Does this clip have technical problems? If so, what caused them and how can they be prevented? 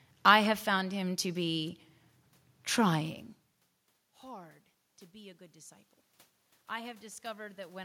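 Yes. Automatic gain rising, 4.22 to 5.94 s: after the input dropped about 24 dB, gain crept up about 4 dB, swelling voice and noise together. The waveform envelope and spectrogram background brighten gradually. Fixing the input gain manually, or disabling automatic gain control, prevents this.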